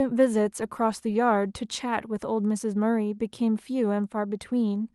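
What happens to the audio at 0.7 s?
Nothing goes wrong at 0.7 s; the speech continues intact through that moment, with no dropout, click or distortion to be heard.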